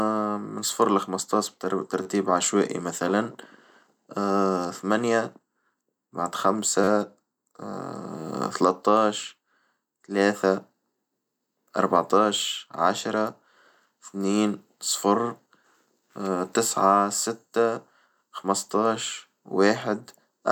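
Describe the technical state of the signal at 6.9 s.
From 6.84 to 6.88 s there is a repeated buffer: fresh audio arrived late, so the device replayed its last block four extra times. Each repeat lasts about 10.7 ms, which fits a 512-sample buffer, producing a brief buzz with hard joins and virtually no lost audio.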